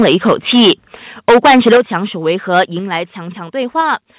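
Right from the start, 0 to 0.73 s, and again from 1.28 to 1.81 s and 2.54 to 2.62 s, the peaks sound flattened and crackly. That's microphone overload, likely from the input gain being set too hot. The waveform is pushed about 11, 12 and 4 dB past the converter's limit. Around a tenth of the samples are clipped in the first and last stretches, and nearly a third in the middle one.

Then the level suddenly drops by about 8 dB at 1.77 s, right as that second distorted stretch ends, followed by further drops of about 4 dB at 2.79 s and about 3 dB at 3.81 s. Voice and background fall together in single steps. That's the microphone volume stepped down, likely the call software cutting the device's input gain after hearing clipping.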